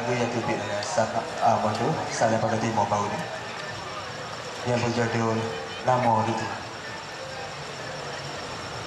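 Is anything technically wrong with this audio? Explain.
No, nothing technically wrong can be heard here.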